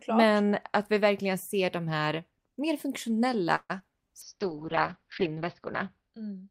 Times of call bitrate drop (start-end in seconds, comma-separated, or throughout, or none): 4.23-6.51